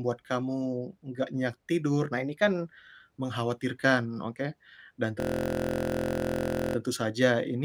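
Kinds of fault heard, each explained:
Drift correction step: From 2.13 to 2.66 s the speech abruptly runs about 6% fast and rises 101 cents, roughly a semitone, then snaps back to normal. This is likely a clock-matching resampler jumping its playback rate in one step to rebalance its buffer.
System hang loop: Between 5.20 and 6.76 s the speech turns into a steady buzz at 43.1 Hz, as one 23.22 ms fragment repeats 67 times. The computer or driver froze while the hardware kept replaying the same ring buffer, which fits 1024 samples.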